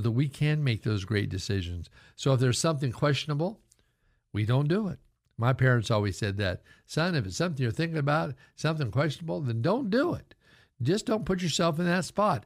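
No technical faults can be heard in this speech recording. At no point does anything in the audio stand out as a problem.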